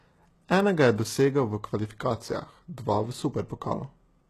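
All the way through, the speech carries plainly audible HE-AAC compression damage, likely from a very low bitrate around 16 kbps. The treble is rebuilt from copied lower bands, so s sounds come out gritty and lispy, and nothing reaches above 12.3 kHz.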